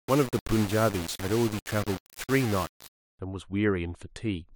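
From the start to about 3.19 s the speech has that grainy, signal-following grit of low bit depth without dither, likely from rounding to only 4 bits. The error sits roughly 10 dB under the speech, so quiet stretches sputter or drop out.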